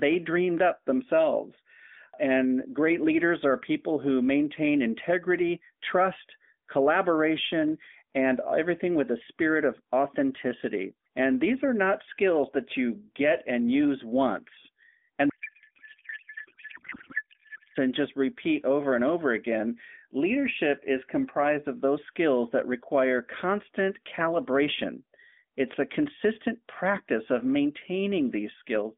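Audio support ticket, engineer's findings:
Codec payload misread, 15.30–17.78 s, after "get and use once" until "and just repeat over". The AMR-NB decoder is unpacking frames in the wrong layout, consistent with octet-aligned payload parsed as bandwidth-efficient. Bits land in the wrong fields, so the speech becomes garbled noise and warble that barely tracks it.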